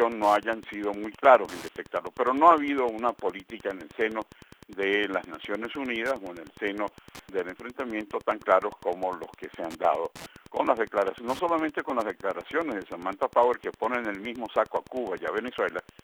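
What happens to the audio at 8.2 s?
At 8.2 s there is Wi-Fi interference, and it runs through the whole clip. A nearby Wi-Fi radio's beacon, sent every 102.4 ms, is rectified by the audio circuit. It sounds like steady ticking about ten times a second, roughly 25 dB below the signal.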